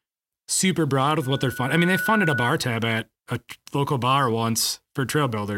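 After "super broad", at 1.22 s, the microphone-loudspeaker loop gain passes one: loudspeaker feedback squeal, a 1.5 kHz tone swelling to speech level, gone by 2.52 s.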